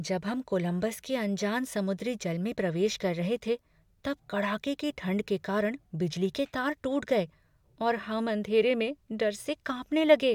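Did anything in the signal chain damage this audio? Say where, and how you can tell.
No, nothing in the signal chain damaged this speech.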